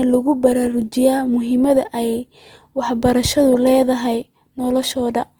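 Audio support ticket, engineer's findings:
Grainy, rough texture on the speech throughout, with plainly audible codec damage. The spectrum still extends to about 20.2 kHz. Likely Opus compression in CELT mode: starved bands are noise-filled, which fits around 24 kbps. Less swirl than MP3, few spectral holes.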